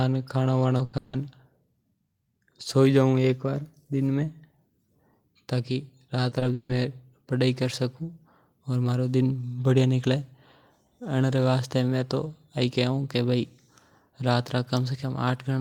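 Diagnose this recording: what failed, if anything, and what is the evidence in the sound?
Short concealed packet loss, network stage: brief smears at 0.77–0.81, 6.29–6.33 and 6.39–6.43 s, each about 20 ms of fill continued from the preceding sound, showing as smoothed, repeated spectrogram columns.

Burst of packet loss, network: 0.85–0.95 s, about 80 ms concealed; the last sound is held and fades, then speech resumes further on.

Long network dropout: at 0.97–1.15 and 6.53–6.71 s, about 160 ms of speech is replaced by fading extrapolated buzz or hiss, with no true silence. The likely cause is a network outage.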